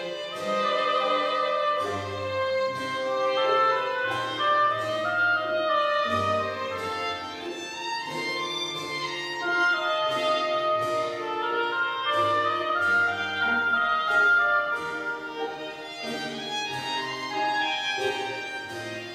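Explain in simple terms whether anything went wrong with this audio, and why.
Nothing went wrong with this audio that a careful listener could pick out. There are no dropouts, glitches or sudden changes anywhere in the recording, so there is no problem to explain.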